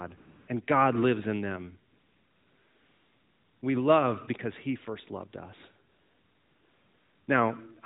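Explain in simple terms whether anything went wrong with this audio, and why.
AMR comfort noise fills three pauses: 0.18–0.48 s, 1.9–3.6 s after "lives in them", and 5.9–7.3 s after "first loved us". Each time, the phone judged nobody was talking and stopped sending sound, so the receiver substituted smooth, steady artificial hiss for the real background.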